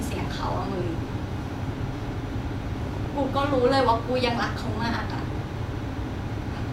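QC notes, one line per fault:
2.87–5.42 s, train of clicks: a steady ticking rides over the speech at about 10.6 clicks per second, evenly spaced, around thirty in all, each peaking a few dB above the speech and clearly audible in gaps too. The closely matching, regularly repeating pulses point to a likely source in nearby equipment interference or a faulty connection or power supply. On a waveform they show as sharp matching spikes; a spectrogram shows thin full-height vertical lines at even intervals.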